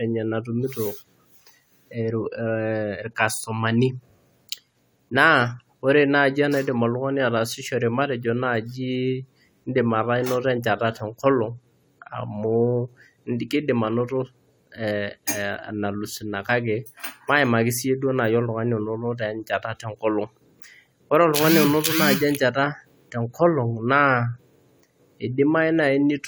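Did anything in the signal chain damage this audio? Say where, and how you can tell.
No, nothing in the chain audibly damaged this speech recording; no stage leaves a mark on the signal.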